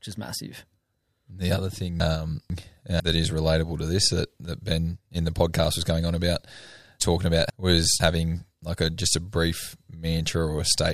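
At 2.0 to 3.0 s and again at 7.0 to 8.0 s, chunks out of order: one 500 ms block arrives a chunk late and plays after its successor, so the two halves swap. Nothing is lost, but each event sounds jumbled, with three hard joins.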